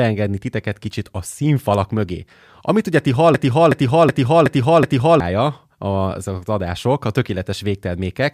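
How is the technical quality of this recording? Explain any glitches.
The recording has one serious glitch. From 3.34 to 5.20 s there is a system hang loop. The system froze while the sound hardware kept replaying its ring buffer. A 0.37 s slice of speech repeats five times at 2.69 Hz, like a skipping record. The length fits a 16384-sample buffer. About two seconds of real audio are lost.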